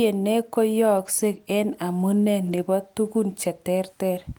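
From 0.97 to 1.07 s, just before "en amune", and again from 2.47 to 2.57 s, right after "en amune", a lost packet is rebuilt from error correction. Lost audio was restored from low-bitrate backup copies, likely around three packets each time. No gap occurs, but both stretches sound rougher and noisier.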